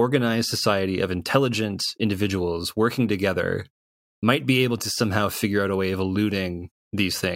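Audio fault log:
Nothing to log here: the speech runs along without a single fault to point at.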